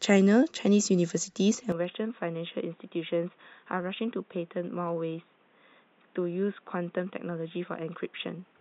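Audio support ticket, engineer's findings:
Speech dulls abruptly at 1.72 s through to end, nothing above 3.8 kHz, level down about 10 dB, new noise floor roughly 35 dB under. No gap at the changeover. Likely input switched to a poorer device, narrower-band mic or headset call profile taking over mid-recording.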